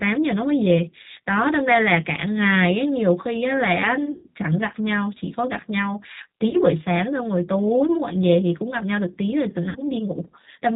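Throughout, the speech carries plainly audible G.729 codec damage, consistent with the 8 kbit/s G.729A variant. Each 10 ms frame is rebuilt from a vocal tract filter, a pitch predictor and a few pulses, with nothing above 4 kHz. Unlike simple band-limiting, the result sounds rough and faintly synthetic as well as dull.

VoIP packet loss concealed by the speech codec occurs at 4.12 to 4.27 s (120 ms lost, which fits six 20 ms packets), 6.49 to 6.57 s (40 ms) and 9.69 to 9.78 s (60 ms). These are not silent dropouts. The decoder stretches the last sound into a buzzy tone or coloured noise that fades, and the speech stays weak briefly after it resumes.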